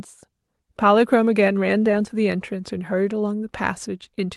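Short concealed packet loss at 1.91 to 1.95 s: about 20 ms of the speech never reached the decoder in time, so the receiver extended the preceding sound for about 15 ms, then crossfaded back into the real signal, leaving a brief smear.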